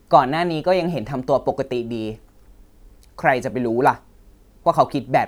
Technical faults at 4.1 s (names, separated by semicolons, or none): none